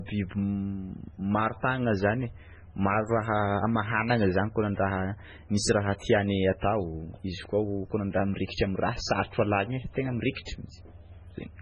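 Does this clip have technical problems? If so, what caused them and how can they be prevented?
Yes. MP3 compression damage runs through the whole speech clip. Nothing remains above 10 kHz, and the sound turns watery and swirly. The likely cause is a starved MP3 encoder, consistent with a bitrate near 16 kbps. It cuts the treble and drops weak frequency lines from frame to frame. To prevent this, encode at a much higher bitrate or keep an uncompressed master.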